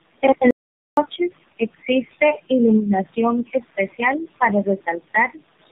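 From start to finish the speech sounds rough, muffled and warbly, with nothing above about 3.8 kHz. This is tandem speech coding. The character points to about three speech codecs in a row, such as CVSD, G.729A and a final AMR-NB stage around 7.4 kbit/s, with G.711 links between them. The call was decoded and re-encoded at each boundary, so every coder worked on the previous coder's artefacts and the damage added up.

From 0.51 s to 0.97 s the sound cuts out into dead digital silence for roughly 465 ms. This is an audio dropout to silence. The gap holds nothing, not even the room noise that sits about 20 dB below the speech elsewhere, and whatever was said in that span is lost. The likely cause is a brief loss of the input, such as a failed link or momentary disconnect, while the recording chain kept writing silence.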